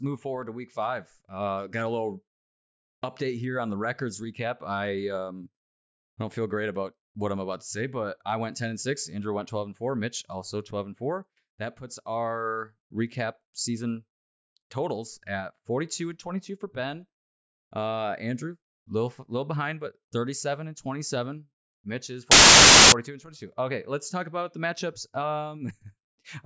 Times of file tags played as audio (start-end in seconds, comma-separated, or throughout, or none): 22.31-22.92